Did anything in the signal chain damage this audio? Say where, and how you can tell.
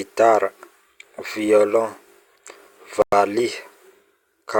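Yes. At 3.02 s the speech drops to silence for about 0.1 s (104 ms), resuming at 3.12 s. The gap is clean rather than smeared or garbled, which points to the wireless playback link and a likely Bluetooth stall: radio interference delayed packets, the headphones' receive buffer emptied, and output paused until retransmitted packets arrived and refilled it, so the signal simply halts and then continues.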